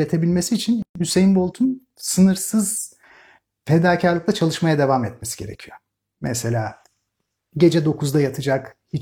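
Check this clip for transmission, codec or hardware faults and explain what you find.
One fault is present in the speech: a gap at a join of encoded pieces, from 0.82 to 0.95 s.

For about 130 ms the sound drops out in the middle of continuous speech, then resumes exactly where it stopped, with nothing missing. The clip appears to have been built from separately encoded segments joined end to end without trimming. The encoder's start-up delay on one piece and the padded final frame on the other were both left in, leaving this stretch of silence. Its edges are smeared by the codec, so the fully silent part is shorter than the gap.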